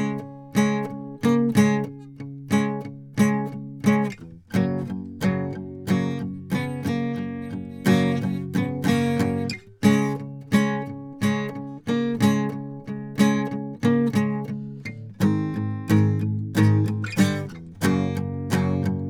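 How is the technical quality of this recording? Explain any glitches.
There are no glitches to explain in this music recording; its technical quality holds steady throughout.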